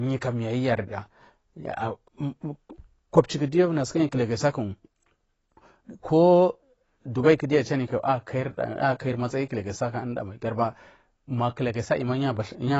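AAC compression damage runs through the whole of this speech recording, with nothing above 8 kHz and a dull, smeared, warbling texture on sustained sounds and sibilants. The likely cause is AAC-LC coding at a low bitrate, around 24 kbps, which lowered the cut-off and starved the upper bands.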